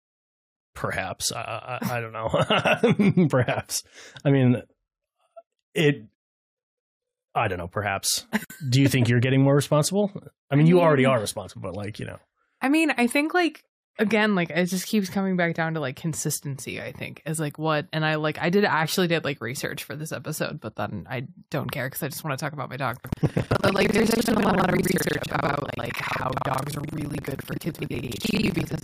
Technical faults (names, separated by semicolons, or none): gap at a join of encoded pieces; buffer tearing